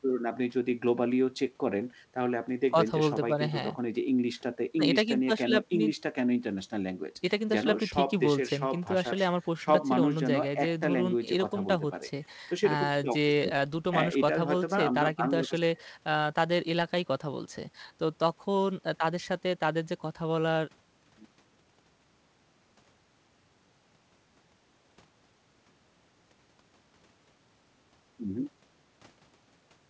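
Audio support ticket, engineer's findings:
No faults found; G.722 path, nothing above 8 kHz.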